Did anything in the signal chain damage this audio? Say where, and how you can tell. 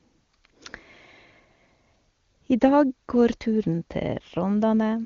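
No, nothing in the signal chain damaged this audio.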